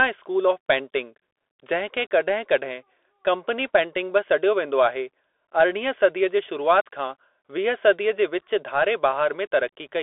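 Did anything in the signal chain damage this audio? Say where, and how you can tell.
Yes, at the codec stage: the Bluetooth CVSD headset codec runs throughout. The speech sits in a 300 Hz to 3.6 kHz band, with scratchy sibilants and granular hiss. That fits a 64 kbps one-bit delta stream whose adaptive step lags steep high-frequency transients. A spectrogram shows an empty region above 3.6 kHz and a speckled noise floor.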